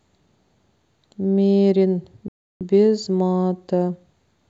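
At 2.28 s the speech drops to complete silence for about 0.33 s, resuming at 2.61 s. This gap is likely a Bluetooth stall: delayed packets let the receiving buffer empty, so playback halted until retransmitted audio arrived.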